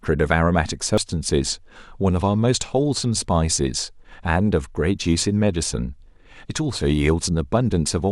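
At 0.98 s a sharp, momentary glitch cuts into the speech, a tiny blip that is over almost before it registers. It comes from damaged data in the compressed stream: some of the data at that point was corrupted, so the decoder could not make sense of the frame there. It lost its place in the bitstream, then hunted for the next valid frame header and locked back on.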